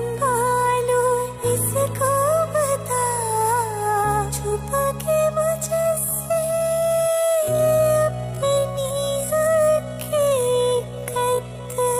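At 5.75 s a time-stretched section begins and runs to the end. Pace drops to roughly half speed, pitch unchanged, so it drags, likely from pitch-preserving stretching.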